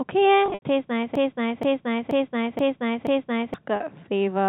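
From 0.46 to 0.62 s there's packet loss with pitch repetition: about 120 ms of audio went missing in bits scattered across that stretch, the longest run 80 ms. The receiver papered over the holes by repeating the last pitch period, so the speech gets a held, buzzy quality, fading where the gap runs longer. The same thing happens more briefly at 3.76 to 3.80 s, where about 40 ms is bridged with a short buzzy hold.

In between, from 1.15 to 3.54 s, you get a broken-record loop. A piece of about 0.48 s plays five times, back to back and identical, so whatever should have come through in those couple of seconds is gone. That's likely a stall in the player or stream that kept resending the last chunk it had. All of this sits on the narrow, telephone-band G.711 sound.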